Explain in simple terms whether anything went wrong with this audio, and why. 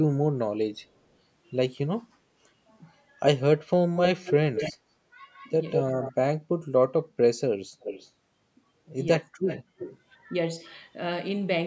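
Two things went wrong on this call. First, an echo leak: the far side was likely on a loudspeaker and its echo canceller failed to remove everything, so a delayed copy of the speech comes back. You hear it at 3.95 to 4.73 s and 5.37 to 6.12 s, lagging about 0.2 s and fairly loud, then at 7.8 to 8.1 s and 9.46 to 9.98 s, lagging about a third of a second and fainter.

Second, speech suppressed in double talk: when both sides talked at once, the echo canceller likely mistook the talker for echo and turned everything down. Around 9.2 to 9.33 s the speech briefly drops almost to silence for roughly 0.15 s.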